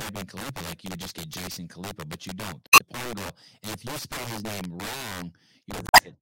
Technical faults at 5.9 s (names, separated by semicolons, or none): integer overflow; damaged data in a compressed stream